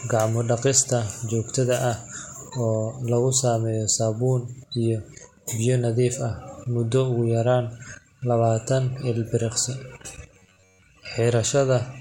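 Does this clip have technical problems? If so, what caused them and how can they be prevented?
Yes. From 10.34 to 10.82 s, audio likely arrived too seldom, so short buffers were looped in its place, producing robotic sound from repeated short buffers, a rigid metallic buzz at 93.8 Hz. A larger buffer or steadier processing would keep fresh audio arriving in time.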